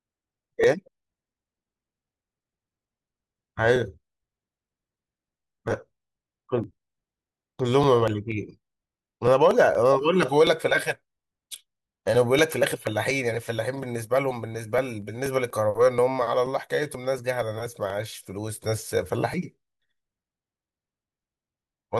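From about 0.16 s through 21.74 s there's a steady run of periodic USB or driver dropouts, roughly every 0.24 s. Each time something stalls the bus or driver and around 10 ms of speech just gets skipped, so you hear regular ticks riding on the voice.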